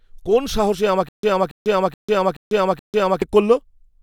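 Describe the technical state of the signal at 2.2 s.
At 2.2 s the speech sits inside a stutter with silent gaps (1.09 to 3.22 s): a 280 ms fragment repeats five times, each followed by 147 ms of digital silence, likely from a stalled stream retrying. The silences set it apart from a plain loop.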